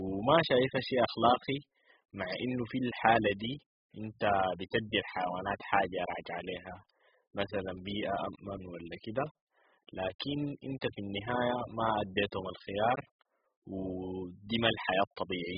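Throughout, the speech sounds dull and smeared, with a fizzy, warbling edge and nothing above 5.1 kHz, likely heavy AAC compression at a very low bitrate.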